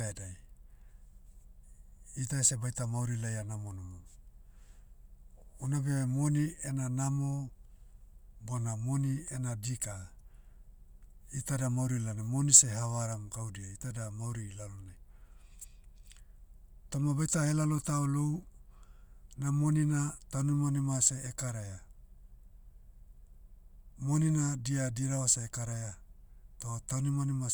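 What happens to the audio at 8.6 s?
At 8.6 s the speech carries on intact, with no dropout, click, distortion or other fault at that moment.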